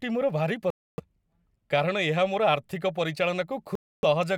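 The speech cuts out from 0.70 to 1.00 s, and again from 3.75 to 4.05 s. Each silence lasts about 0.28 s. This is likely a Bluetooth dropout: packets arrived late and were discarded, and the speech resumes further on.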